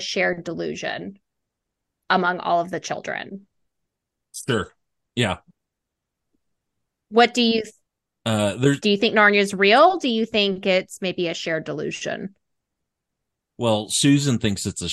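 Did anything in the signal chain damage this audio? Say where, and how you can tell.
No, nothing I can hear in this speech points to any stage of the chain having damaged it, so there's nothing to trace back.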